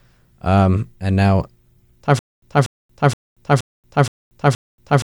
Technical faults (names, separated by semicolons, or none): stutter with silent gaps